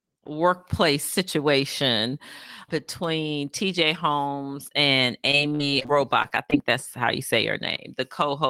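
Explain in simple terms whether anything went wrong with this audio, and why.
Between 5.31 and 6.54 seconds, the connection kept dropping or delaying small chunks of the audio. This is repeated packet loss, which makes the sound robotic. The receiver covered each hole by stretching the sound that came just before it. The holes came in quick succession, around ten of them, none longer than about 47 ms. As a result, the speech there sounds choppy, with bits missing, right up to "that's how you say".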